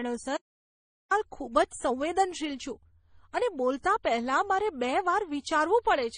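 A speech recording, likely passed through low-bitrate MP3 and then AAC-LC encoding; this transcoding between lossy codecs leaves stacked smearing artefacts and nothing above 9.8 kHz, consistent with about 32 kbit/s. Between 0.37 and 1.11 s the input was likely lost while recording continued, producing an audio dropout to silence: about 0.74 s of dead silence without room tone.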